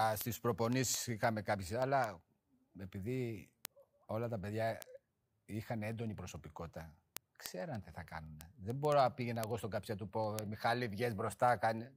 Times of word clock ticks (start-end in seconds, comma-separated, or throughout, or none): 0.14-11.92